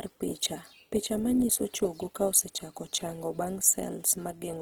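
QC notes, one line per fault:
Throughout: Opus compression. The speech sounds plainly rough and grainy, with harmonic detail turned noisy rather than holey or swirling. The cause is likely the Opus encoder running in its CELT music mode. It preserves each band's energy but, short of bits, fills the fine structure by folding lower bands or injecting noise. Bandwidth remains full, with content up to about 20.2 kHz, and the degree of grain fits a rate near 16 kbps.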